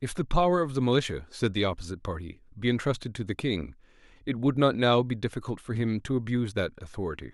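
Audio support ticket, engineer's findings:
Listened to the full speech recording; nothing stood out, no findings to log.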